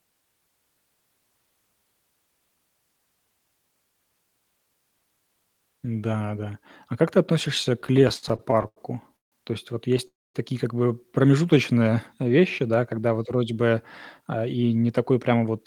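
From 7.81 to 8.78 s, right after "как ты относишься", the speech shows repeated stalls (stutter). Packets kept arriving too slowly for playback, so the jitter buffer emptied 15 times in under a second. Each time the receiver stretched the last sound to bridge the wait, filling 248 ms in all, about a quarter of that stretch, with the longest hold at 83 ms. Nothing is lost, but the speech drags and catches. Many short, closely spaced holds set this apart from a freeze.

Two call audio freezes follow, at 9.16 to 9.34 s and at 10.07 to 10.36 s, the second ending just before "такие как бы э". Packets were likely held up in transit, emptying the buffer. The receiver carried the last sound briefly and then let it fade to silence, for 150 ms and 230 ms respectively, and speech then resumes where it stopped, pushed 155 ms and 269 ms later. Unlike the stutter, each is a single clean gap that goes quiet.

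From 11.39 to 12.29 s a jitter buffer slow-down stretches the speech to about 92% speed by repeating single pitch periods, adding 84 ms. Pitch stays the same while sounds are drawn out, perhaps with a faint warble. Because the delay is spread through the speech rather than inserted as a pause, no gap is heard.

From 14.20 to 15.59 s, after "когда вот вроде бы", a jitter buffer speed-up does the reverse. Short pitch-period pieces, about a tenth of a second in total, are cut to shed excess buffered audio. The speech runs at about 108% speed with its pitch unchanged and sounds hurried. It has none of the drawn-out quality of the slow-down, and there is no break in the sound.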